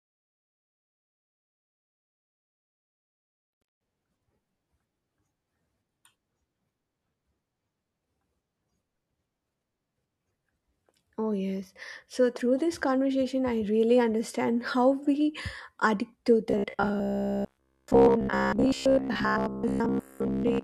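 Just after "how we addict to", the speech turns into a rigid metallic buzz from 16.50 s to the end at 20.63 s, pitched at 66.8 Hz. That's likely robotic sound from repeated short buffers, with about 15 ms chunks replayed for most of that stretch instead of fresh audio.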